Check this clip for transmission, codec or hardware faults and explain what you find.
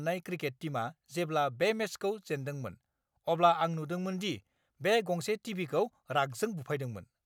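Nothing stood out on listening to this speech recording.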